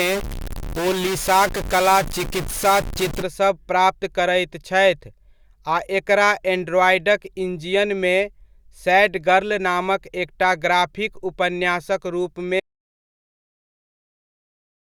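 Distortion rides over the speech from the very start until about 3.22 s, clearing just before "प्राप्त करैत छथि", and the gaps between sounds fill with a gritty noise floor instead of quiet. That combination points to a stuck bit: one bit of each sample held fixed, likely by a faulty data line or converter, throws roughly half the values off by a fixed step and flips small values around zero into noise. Later, right after "एकटा ग्राफिक उपन्यासक रूपमे", the speech cuts off mid-flow at 12.6 s and the rest of the recording is dead silence, with no room tone at all. This is an audio dropout to silence, where the input was lost, likely through a disconnected device or broken link, while the recorder kept writing silence, so whatever followed is gone.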